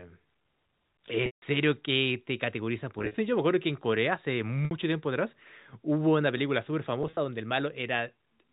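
Packet loss with pitch repetition occurs at 1.26–1.42 s (160 ms), 2.99–3.17 s, 4.65–4.71 s and 7.03–7.17 s. Held, buzzy repeated pitch periods fill the shorter gaps, while the long first loss fades into silence before the speech cross-fades back, unlike the hard silent holes of plain dropouts.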